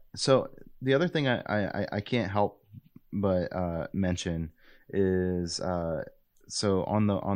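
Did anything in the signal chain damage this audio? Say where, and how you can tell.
No, no stage of the chain has left any audible damage on this speech recording.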